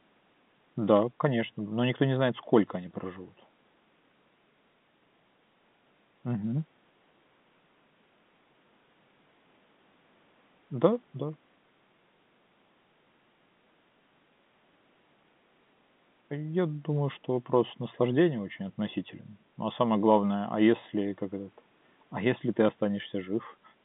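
Nothing faulty is audible anywhere in this speech recording.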